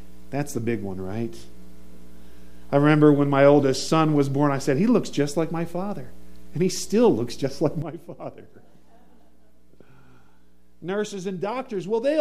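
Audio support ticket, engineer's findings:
Sudden gain jump at 7.82 s: sound and noise floor drop together by about 12 dB, staying down to end. Waveform shows a vertical step in envelope; spectrogram darkens uniformly across all bands. Likely an unramped digital gain change or bit shift.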